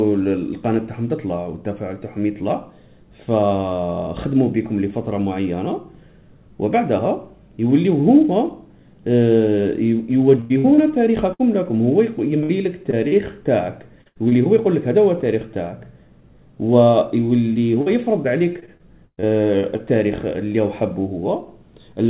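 Repeated packet loss (robotic sound) runs from 10.4 to 14.33 s and again from 17.53 to 19.81 s. Packets kept going missing, and each hole was patched by stretching the last stretch of sound. The first span has about half a second patched, with gaps up to 97 ms. The second has about 0.3 s patched, with gaps up to 119 ms. The result is a choppy stutter with pieces missing, over a narrowband path, which has nothing above 4 kHz and fits a G.711 call.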